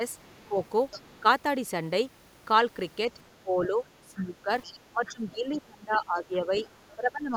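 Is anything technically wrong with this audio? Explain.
Yes. The other side's voice leaks through from 0.23 to 1.2 s and from 4.63 to 5.11 s, roughly 20 dB below the talker. This is likely residual loudspeaker echo that the canceller missed. On a spectrogram it shows as a faint second set of harmonics.

The speech is also suppressed in double talk at 0.48–0.57, 3.43–4.5, 4.91–6.52 and 6.95–7.35 s. The echo canceller likely ducked both voices at once. The waveform shows envelope dips of roughly 10 to 20 dB.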